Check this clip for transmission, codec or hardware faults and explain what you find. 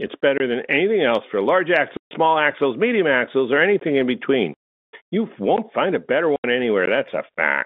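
Two kinds of dropout interrupt the speech, carried over a G.711 telephone path that limits it to the usual narrow phone band.

Blocks of digital silence occur at 0.38 to 0.40 s, 3.79 to 3.81 s, 5.56 s and 6.86 s. Output buffers likely went unfilled, with the first fitting a 1024-sample buffer, so the audio snaps to silence and back, giving clicks or brief holes.

Packet loss filled with silence occurs at 1.97 to 2.11 s, 4.54 to 4.81 s and 6.36 to 6.44 s. The receiver substituted silence for lost packets, and the hole lengths fit 10 ms packets. Speech is chopped out between hard edges.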